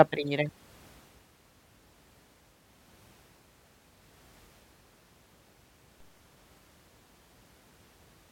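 At 6.00 s a DC step occurs: the waveform's zero line abruptly shifts by an offset of about -49 dBFS, as if an input carrying a DC offset were switched into the path. That sudden displacement registers as a brief low thump, while the speech carries on unaffected. The offset doesn't hold; it bleeds away as though through a high-pass at 2 Hz, so the baseline drifts back toward zero over the following fraction of a second.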